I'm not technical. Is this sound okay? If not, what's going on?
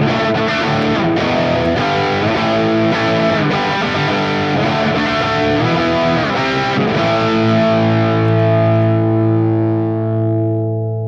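Yes, nothing in this recording points to a technical problem; the signal stays steady and intact the whole way.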